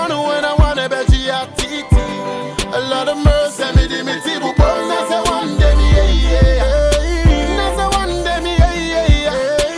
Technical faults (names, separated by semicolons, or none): none